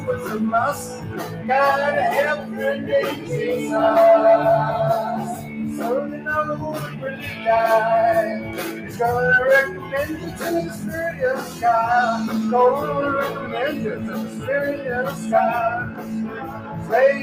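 A noise suppressor applied to music or sounds runs through the whole clip. Built for speech, it treats steady tones and ambience as noise. Its gain keeps shifting by roughly 10 dB. Attacks get through, but sustained parts sink, so the sound pumps and thins.

Sound is cut by the noise suppressor from 0.0 to 3.3 s, from 5.35 to 7.46 s, from 8.4 to 11.63 s and from 13.4 to 16.92 s. In each span, held and decaying sound drops by about 7 to 8 dB. About a second or more of each span is pulled down, and tails end early.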